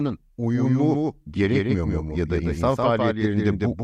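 A doubled audio track runs through this whole speech clip: a second, full-band copy trails the original by roughly 150 ms at a level about 5 dB lower, with no decay or room colour. It is likely captured twice by a slower path.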